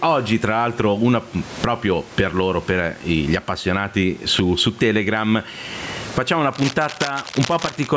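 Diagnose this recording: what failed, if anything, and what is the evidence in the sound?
Gain pumping runs through the whole recording, at the input gain and dynamics stage. The gain swings by roughly 20 dB, so loud and quiet syllables sit squashed close together. The likely cause is input gain set far too high, with a fast limiter or compressor clamping it down on each peak and releasing between phrases. A noise gate would differ: it silences the pauses instead of lifting the room noise in them.

Cable scratch noise appears from 6.52 to 7.87 s and points to the analogue wiring. Dense, irregular bursts of scratching and rustling sit over the speech, about 10 dB below it, for just over a second. This is likely a worn cable, connector or control being moved, so its contact resistance jumps about rapidly. Buffer dropouts sound different. They give sharp clicks or gaps, whereas this noise is uneven and grainy and tracks the physical movement.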